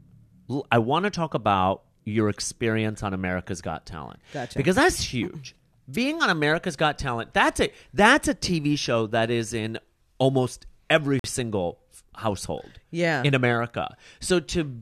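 At 11.19 s, the time stamps of two adjacent stream segments leave a 47 ms gap between stream segments, which fits 4-second segments, and the player fills it with silence. The speech cuts out with hard edges until 11.24 s, then resumes delayed, with nothing lost.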